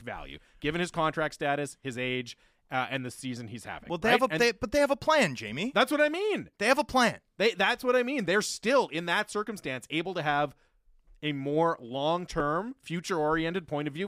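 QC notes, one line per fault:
No faults found in this clip.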